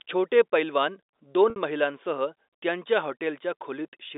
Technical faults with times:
1.50-1.56 packet loss with pitch repetition

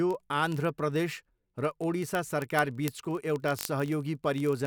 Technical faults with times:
0.11-4.65 word clock ticks

